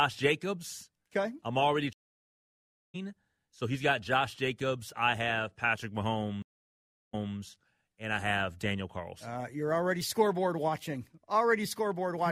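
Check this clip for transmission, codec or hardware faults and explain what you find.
Two stream reconnects. At 1.93–2.96 s, after "I'm already", a 1.01 s dropout ends with the audio resuming about a second later. At 6.42–7.36 s, a 0.71 s gap resumes 0.23 s earlier, repeating audio after a fresh decoder restart.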